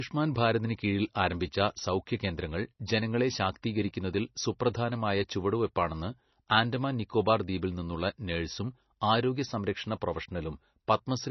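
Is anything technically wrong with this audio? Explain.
Yes, two faults are audible.

Throughout the speech, the sound is watery and swirly, with nothing above 5.9 kHz and s sounds reduced to metallic chirps. This is likely heavy MP3 compression: short of bits, the encoder cut the treble and let weak frequency lines flicker between frames, which fits a very low bitrate near 24 kbps.

At 10.87 s, a brief hiss of about 10 ms comes just before a sharp attack, which sounds soft and smeared. This is pre-echo: the codec spread the noise meant for the loud onset across its whole block, filling the quiet moment before it.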